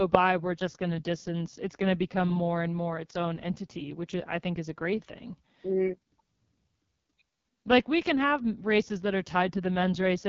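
Speech coming through the AMR wideband (HD Voice) codec, and at a very low rate: the whole thing sounds rough and raspy from start to finish, which fits the lowest mode at around 6.6 kbit/s. At that rate the pulse-driven vocal tract model has too few bits to follow the voice, so it turns gritty. There's nothing above about 7.3 kHz, and the top band is just shaped noise standing in for real detail.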